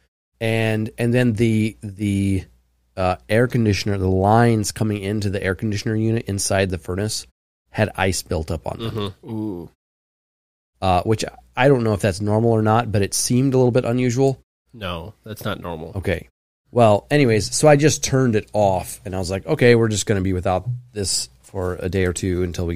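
Listening through the speech, nothing stood out as a fault, and the background quietly dropping away in the pauses is simply the muting of silent gaps at work.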